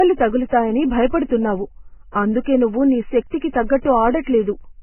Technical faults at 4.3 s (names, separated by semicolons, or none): low-bitrate audio saved at a high bitrate